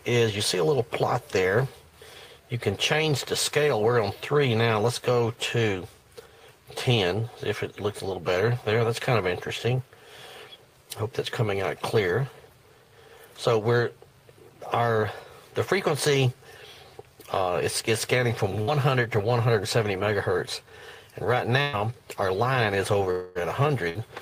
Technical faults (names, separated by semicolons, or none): burst of packet loss; long network dropout